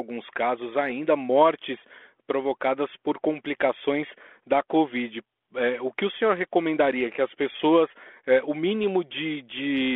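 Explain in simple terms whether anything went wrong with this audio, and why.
Nothing went wrong; no faults can be heard here.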